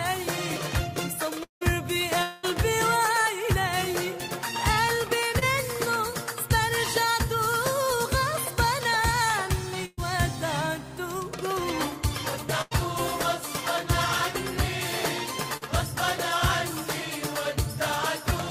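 At 1.43–1.63 s and 2.23–2.45 s, a likely long network dropout: about 180 and 200 ms never arrive. The first fades into roughly 130 ms of silence, and the second is bridged throughout by a decaying continuation of the last sound. At 5.39–5.43 s, a short concealed packet loss fills a 20 ms hole with extrapolated sound, leaving a brief smear. At 9.85–9.99 s and 12.61–12.73 s, a burst of packet loss drops 120 and 80 ms, and the fading continuation skips ahead. At 15.57–15.63 s, another concealed loss of 40 ms causes a short wobble.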